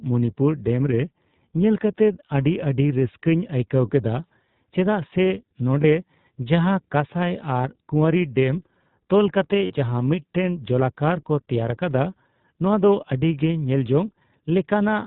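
iLBC codec coding runs through the whole of this speech recording, with plainly audible damage: nothing above 4 kHz survives, and the voice has a rough, slightly synthetic edge because each 20 ms frame's excitation is coded on its own, which fits the 15.2 kbps mode. Lost iLBC frames break in three times: a 20 ms gap at 5.82 s, another 20 ms gap at 7.62 s just before "ᱠᱩᱣᱟᱹᱨᱤ ᱰᱮᱢ ᱛᱚᱞ", and a 40 ms gap from 9.66 to 9.74 s just after "ᱠᱩᱣᱟᱹᱨᱤ ᱰᱮᱢ ᱛᱚᱞ". In each, the decoder fills the hole by repeating the last pitch cycle mixed with noise, giving a brief buzzy, held-vowel smear, and the voice recovers almost at once because iLBC frames stand alone.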